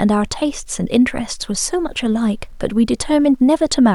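Throughout the speech, quiet passages sound grainy and gritty, and the texture shifts with the sound itself. This is low bit depth without dither, likely from rounding to about 10 bits. The resulting error sits roughly 45 dB below the signal and tracks it.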